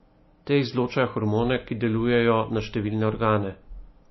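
MP3 compression runs throughout: the speech has nothing above 5.8 kHz and plainly audible codec damage, likely from an encoder starved of bits, which fits a low bitrate near 24 kbps. It cut the treble and dropped weak frequency lines, leaving a watery, swirling sound with smeared attacks.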